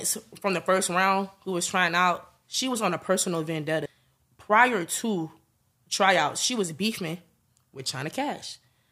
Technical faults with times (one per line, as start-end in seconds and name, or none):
3.85 compressed frames skipped